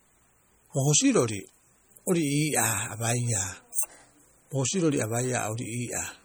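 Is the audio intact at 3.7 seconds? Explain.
No, MP3 compression damage runs through the whole clip, including 3.7 s. Short of bits, the encoder likely zeroed weak frequency lines that flicker on and off between frames, so the speech sounds watery and swirly, with chirpy sibilants and smeared onsets, as fits roughly 48 kbps.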